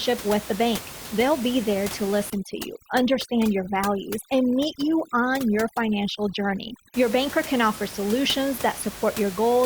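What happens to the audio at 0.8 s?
At 0.8 s the speech comes through intact, with only the room's own background noise sitting about 14 dB beneath it as part of the recording.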